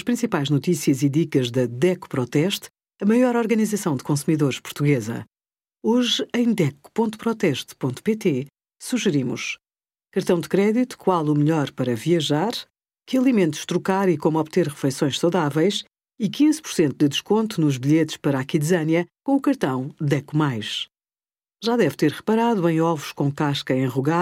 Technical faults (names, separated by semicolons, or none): none